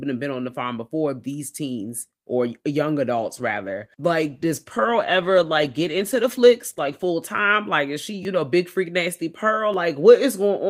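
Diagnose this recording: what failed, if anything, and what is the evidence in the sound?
Call bitrate drop at the codec stage: from 3.16 to 7.19 s, after "these teens or young", speech turns coarse and muffled as encoding falls from 48 to 16 kbps.

Repeated buffer at the driver stage: brief stutters at 8.23 to 8.25 s, after "is she", and at 9.73 s, after "know big freak nasty". Each replays a 10 ms buffer when fresh audio arrived late.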